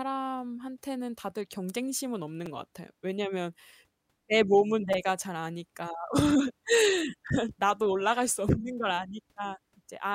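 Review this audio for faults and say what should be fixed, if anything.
Two repeated buffer glitches turn up in the speech, at 2.46 s and 4.93 s. New audio arrived late, so the device replayed its last chunk, twice then three times. That fits a tiny 5 ms buffer, so each sounds like a brief buzzy click. A larger playback buffer or more scheduling headroom would prevent these underruns.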